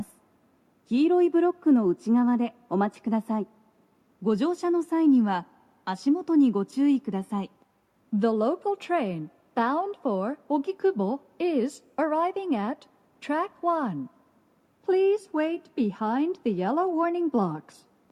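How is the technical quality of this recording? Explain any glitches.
The technical quality of this recording holds up, with no glitches to explain.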